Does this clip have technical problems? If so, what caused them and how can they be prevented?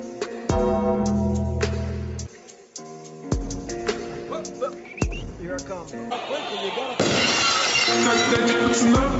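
No, nothing here needs fixing; the top end stopping at about 8 kHz is just the normal bandwidth of a call microphone and codec, so there's nothing to prevent.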